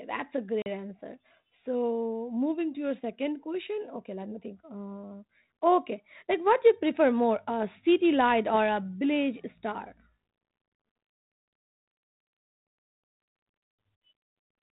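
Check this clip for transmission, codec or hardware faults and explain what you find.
One fault stands out: packet loss on an ADPCM call at 0.62 to 0.67 s, just after "that's a". About 40 ms, roughly two packets, becomes hard-edged silence. The decoder's predictor and step size then mismatch the sender's, so speech resumes slightly distorted before settling. A waveform shows a flat gap with abrupt edges. A spectrogram shows a blank vertical strip.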